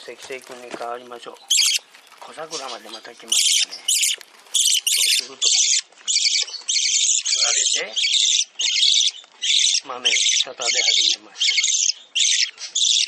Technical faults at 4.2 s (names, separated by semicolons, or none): none